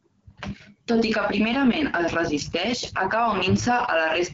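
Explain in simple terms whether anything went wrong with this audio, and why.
Something did go wrong: the speech has passed through the AMR wideband (HD Voice) codec, a phone-call compression system, and it sounds rough and raspy from start to finish. The codec rebuilds the voice from a simple model of the throat driven by pulses, and at this low setting that model is too coarse, so the damage is plainly audible. Unlike an old narrowband phone line, the sound isn't muffled. Some brightness remains up top, but that region is filled with noise rather than real detail.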